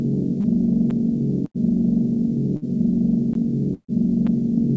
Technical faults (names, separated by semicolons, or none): short concealed packet loss; block of digital silence; burst of packet loss